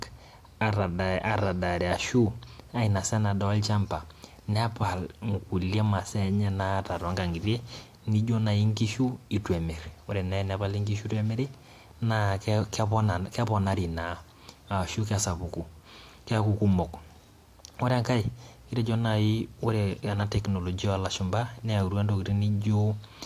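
No technical faults are audible anywhere in the speech recording.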